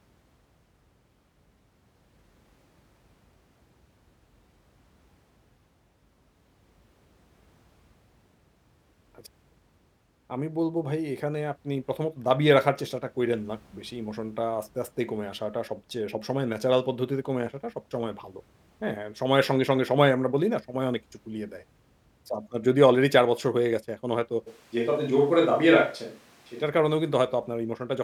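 A switch to a distant microphone, 24.5 to 26.6 s: speech suddenly turns roomy and thin, level unchanged, likely from the close microphone dropping out.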